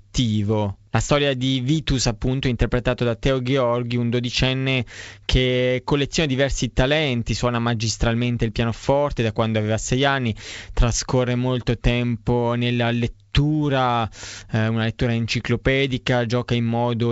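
At 1.72 s a rough burst runs to about 1.80 s, and at 9.88 s there's a short pop, both bit errors on an ADPCM link. Flipped bits throw off the decoder's step size and predictor, so each error smears briefly with a jump in level.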